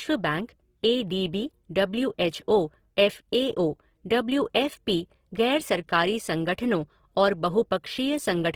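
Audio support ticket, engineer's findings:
Speech grainy and rough throughout, full length. Voiced harmonics turn noisy, not swirly. Bandwidth stays wide, content up to about 20.2 kHz. Likely Opus compression in CELT music mode. Band energy kept, detail noise-filled. Damage fits a low bitrate near 16 kbps.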